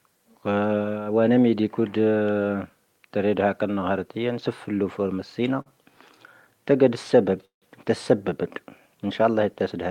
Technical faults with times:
5.61-5.68 short stall from a late packet
7.45-7.64 call audio freeze

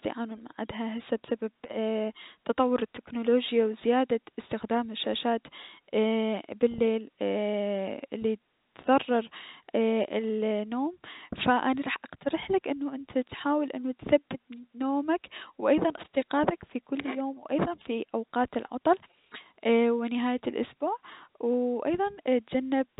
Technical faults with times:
none

